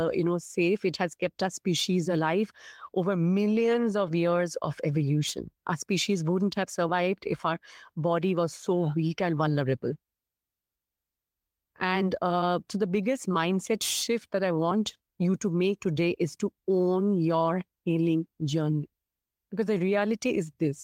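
Nothing in the recording stood out as a technical problem when listening to it.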